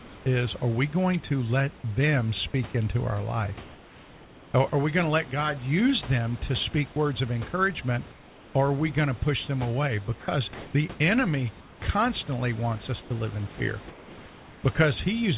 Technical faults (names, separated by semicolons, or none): sound dropped by the voice detector; comfort noise in place of the background; onset clipped by the voice detector